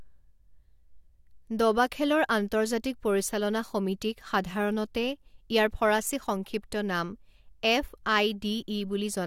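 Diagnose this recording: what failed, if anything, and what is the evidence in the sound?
Nothing in the signal chain appears to have failed: the speech arrives as one continuous, steady recording with no audible breaks, level jumps, distortion or timing disturbances at any stage.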